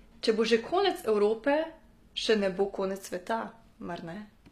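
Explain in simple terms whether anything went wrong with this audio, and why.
The s sounds are gritty and lispy from start to finish, and the treble sounds artificial, with nothing above about 15 kHz. This is likely HE-AAC compression, which keeps the lower sounds and fakes the treble by copying them upward.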